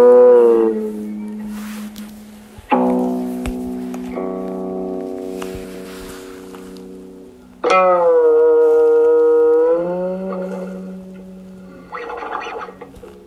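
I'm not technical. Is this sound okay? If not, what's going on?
No. At 1.88, 5.64 and 12.40 seconds, frames out of order swap two tenth-second pieces, causing a brief garbled flutter.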